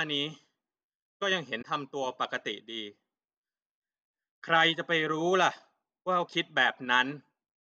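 At about 1.58 s the speech is interrupted by a brief burst of damaged data in a compressed stream, lasting roughly 70 ms until about 1.65 s. Some of the encoded bytes at this point are corrupted, so the decoder cannot interpret those frames properly. It misreads or drops them and then recovers sync at a later valid frame. What reaches the ear is a short disruption that cuts across the speech before normal decoding resumes.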